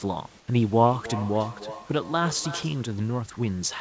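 Comfort noise in place of the background appears from 0.40 to 0.48 s in this speech recording. For those 80 ms the real room background drops out and a steady, featureless hiss about 6 dB quieter fills the gap. The likely cause is discontinuous transmission: the sender's voice detector judged the moment silent and stopped sending audio, so the receiver synthesised a rough stand-in for the background until real audio resumed. Feedback echo between two devices follows from 0.79 to 2.88 s. The speech comes round again at a steady interval of about a third of a second, peaking about 12 dB below the direct speech, with each pass thinner and more ringing. This is the signature of two devices on the same call in one room. One plays out what the other's microphone picked up, that microphone captures it again, and neither echo canceller can remove sound played by the other device. Throughout, nothing is heard above 8 kHz, which fits a wideband call codec such as G.722.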